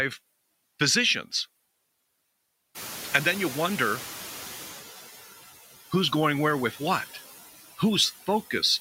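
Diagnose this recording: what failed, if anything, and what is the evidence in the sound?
Noise suppressor artifacts throughout, in call processing: the suppressor cuts steady noise by about 13 dB frame by frame, so the noise sinks between words and rises under them.

Noise suppressor catching up, 2.74 to 4.83 s: room noise jumps around 2.5 s, reduction starts at only about 9 dB, then deepens as the estimate adapts over 2.09 s.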